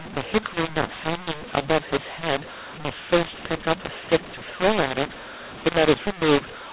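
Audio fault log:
throughout, mu-law and A-law mixed up: the speech was coded with mu-law but decoded as A-law, so each 8-bit code lands on the wrong point of the other law's logarithmic curve. Some levels come out too large and others too small, and near-silent samples are pushed well above zero. The speech sounds harsh and gritty, and the pauses fill with hiss. The waveform has a jagged envelope and gaps that never settle flat. On a spectrogram, broadband noise smears up to the 4 kHz telephone ceiling, including the gaps.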